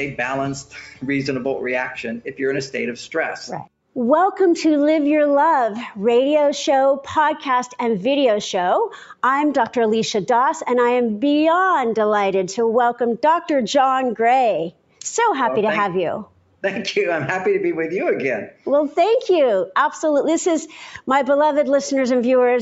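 At 14.71 to 15.0 s, 16.25 to 16.63 s and 18.51 to 18.66 s, sound is cut by the noise suppressor. It mistakes real sound for noise and pulls it down, by about 12, 12 and 10 dB. Each dip lasts a fraction of a second. Sustained parts sink briefly, beneath a top band that stops at 8 kHz.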